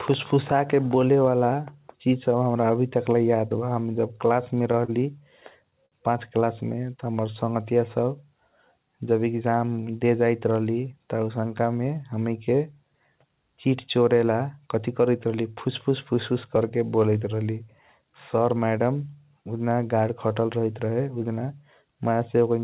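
Speech over a call path with nothing above 4 kHz, which fits G.711 mu-law at 64 kbps, and it has two short stalls from a late packet, at 4.85 to 4.90 s and 5.86 to 5.94 s. The jitter buffer ran dry there, so the receiver held the last sound for 33 ms and then 59 ms, giving a slight buzzy drag with nothing lost. There's also a jitter buffer speed-up from 9.26 to 9.55 s. The receiver trimmed about 40 ms of pitch periods to catch up, so that stretch runs hurried at around 112% speed with the pitch unchanged.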